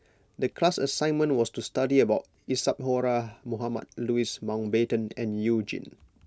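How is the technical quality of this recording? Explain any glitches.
No technical faults can be heard in this recording.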